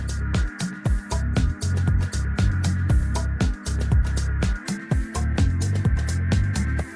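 From the start up to about 4.64 s there's a wrong sample rate problem. The samples are being clocked out slower than they were captured, with no conversion, so everything runs at about 0.92 times normal speed and sits roughly 1.5 semitones flat. It fits 24 kHz material being played at 22 kHz. You hear the sound as slightly dragged and lower, a bit sluggish and darker.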